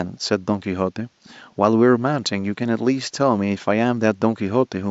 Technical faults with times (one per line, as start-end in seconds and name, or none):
none